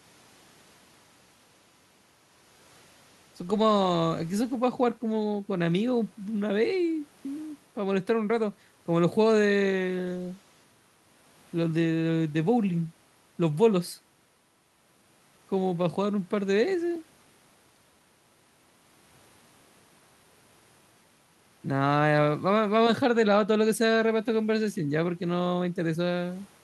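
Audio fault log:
No faults detected.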